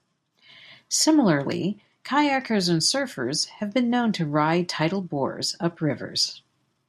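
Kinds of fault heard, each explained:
No technical fault can be heard in this speech recording. There is nothing to list under any kind.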